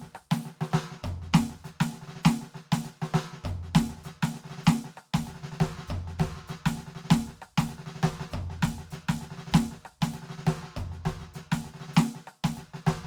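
No technical faults can be heard in this music.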